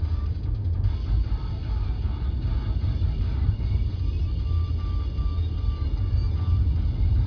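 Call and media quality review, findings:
No audible faults found in the sound; nothing to action.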